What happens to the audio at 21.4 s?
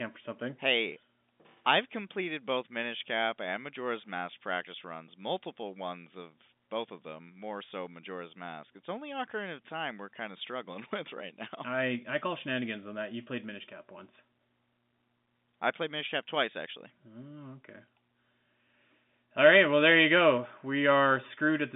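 Nothing goes wrong at 21.4 s: the speech carries on intact through that moment, still heard through the narrow telephone band of G.711 coding with nothing above about 3.7 kHz.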